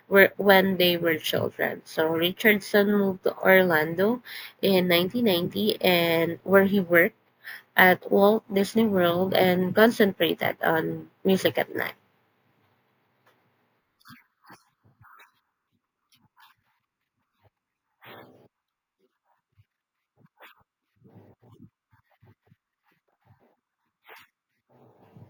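A bright, metallic fizz rides on the speech from start to finish, rising and falling with it. This is imaging from sample-and-hold upsampling: each sample was simply repeated without smoothing, which fits a 16 kHz to 48 kHz conversion. Mirrored copies fill 8 to 16 kHz, about 19 dB below the speech.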